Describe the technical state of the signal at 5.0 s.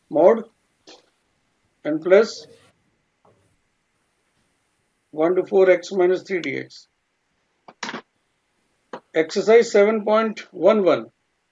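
At 5.0 s the signal is intact, with no audible dropout, distortion, glitch or other technical fault at that point.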